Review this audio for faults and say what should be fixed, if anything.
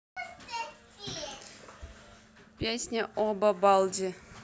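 No faults found in the speech; nothing to fix.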